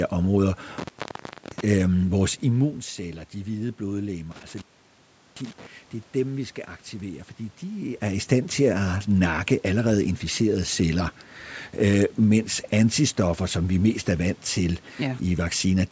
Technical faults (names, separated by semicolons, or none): intermittent contact